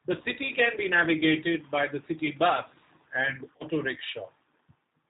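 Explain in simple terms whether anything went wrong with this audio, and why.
The whole clip went through the G.729 codec, a phone-call codec that rebuilds speech from a simple model of the voice. It cuts everything above 4 kHz. So the speech sounds muffled, slightly rough and synthetic. The damage is plainly audible.

At 3.56 to 3.64 s there is VoIP packet loss concealed by the speech codec. About 40 ms of audio never arrived. The decoder guessed by repeating and fading the last sound, so you hear a brief stretched smear. The speech stays weak just after.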